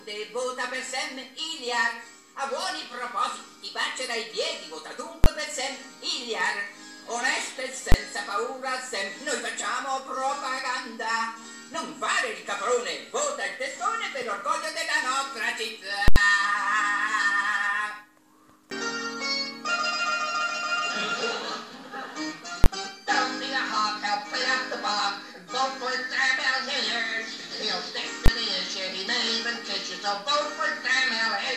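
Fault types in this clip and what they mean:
Invalid numbers at full scale: a calculation overflowed to infinite or undefined values, pinning the output at one extreme value for a whole block. The four 20 ms blocks, at 5.24, 7.92, 22.64 and 28.26 s, each come across as one sharp bang. The 80 ms block from 16.08 to 16.16 s gives a loud pop at each edge with silence between. On the waveform these appear as flat plateaus far beyond the audio's peaks. On the spectrogram they show as bright full-height vertical lines.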